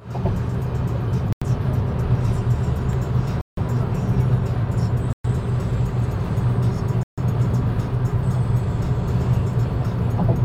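A recording of everyday sounds, cut four times by brief hard silences: 1.33 to 1.42 s (90 ms), 3.41 to 3.57 s (161 ms), 5.13 to 5.24 s (115 ms) and 7.03 to 7.18 s (144 ms). These are likely Bluetooth stalls, where held-up packets let the headphone buffer run dry. Unlike packet-loss concealment, the gaps are true silence rather than smeared or repeated sound, and playback simply resumes after each one.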